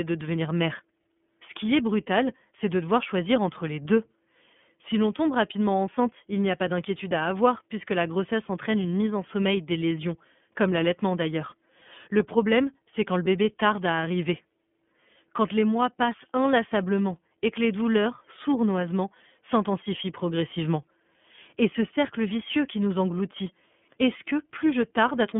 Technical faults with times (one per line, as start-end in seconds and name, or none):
0.00-25.39 iLBC codec